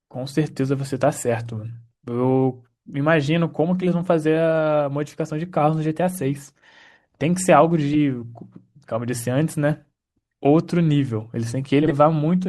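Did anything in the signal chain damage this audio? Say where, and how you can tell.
Yes, frames out of order at the network stage. At 7.93 s and 11.83–11.92 s a short stretch plays with its halves swapped, giving a garbled flutter. The waveform shows sharp discontinuities there, and formant tracks jump backward on a spectrogram. The swapped 10 ms and 40 ms blocks fit one-frame and four-frame reordering, with no time lost.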